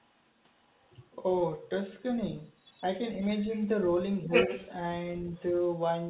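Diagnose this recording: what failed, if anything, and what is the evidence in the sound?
Call processing: the echo canceller likely failed to strip the far-end loudspeaker signal from the microphone. The other side's voice leaking through appears at 0.00–0.29, 0.53–0.93, 2.57–2.82, 3.40–3.68, 4.32–4.70 and 5.35–5.40 s. It is mostly faint, about 25 to 40 dB under the talker, but about 5 dB above it at 4.32 s.

Also call processing: with both sides talking, the canceller likely treated the near-end talker as echo and attenuated everything. This speech suppressed in double talk is a dip of about 10 dB from 4.26 to 4.32 s, roughly 70 ms, just before the loudest leak.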